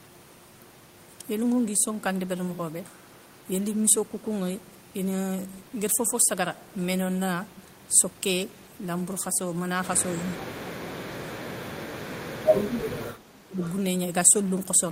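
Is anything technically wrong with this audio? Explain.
Yes. The speech drops out in two stretches, from 10.13 to 11.67 s and from 12.46 to 13.62 s, sinking by about 25 dB at its deepest. This is likely speech suppressed in double talk: with both sides talking at once, the echo canceller could not tell this talker apart from loudspeaker echo and pulled the level down on both.

Right after the second dip, from 13.63 to 13.70 s, a faint, brief repeat of the voice appears about 334 ms behind the original, sitting roughly 20 dB under it. That is likely an echo leak: a loudspeaker on one end fed the microphone, the canceller left part of that pickup in place, and the remainder traveled back down the line as a delayed copy.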